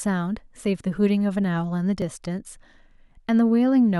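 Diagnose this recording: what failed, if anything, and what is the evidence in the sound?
Dropped buffer (overrun) at 2.02 s, in the driver or buffer stage: the speech jumps forward, likely a buffer overwritten before capture, losing a few milliseconds.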